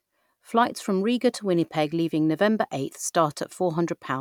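No technical faults are audible anywhere in the speech.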